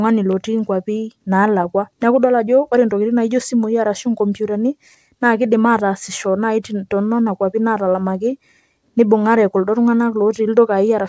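Nothing faulty is audible in this speech recording.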